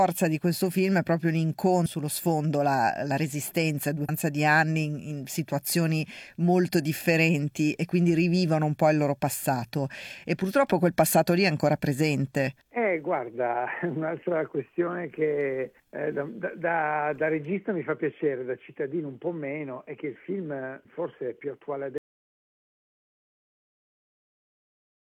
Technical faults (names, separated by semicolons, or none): damaged data in a compressed stream; audio dropout to silence